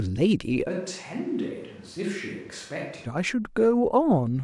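From 0.70 to 3.05 s the speech abruptly turns roomy, thin, noisier and about 10 dB quieter, likely a switch to a distant microphone.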